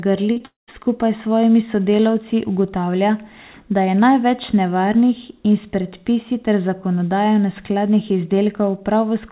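Right at the start, from 0.32 to 0.38 s and again from 0.38 to 0.42 s, there's short concealed packet loss: about 40 ms and then 20 ms of the speech never made it to the decoder in time. The receiver papered over both gaps by stretching out the last bit of sound, so you hear a quick smeary wobble rather than a clean hole, and then it blends back into the real audio.

Just after that, from 0.46 to 0.69 s, comes what's likely a long network dropout. Roughly a fifth of a second of audio went missing. The receiver keeps the last sound going as a fading buzz, which then gives way to about 150 ms of plain silence. Speech picks up again at "s svojimi sodelavci", with the lost stretch simply gone. All of this sits on a narrowband call sound with nothing above 4 kHz, which fits a G.711 phone-style codec.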